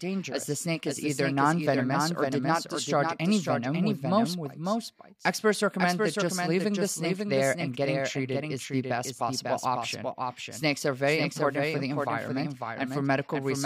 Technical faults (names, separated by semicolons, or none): doubled audio track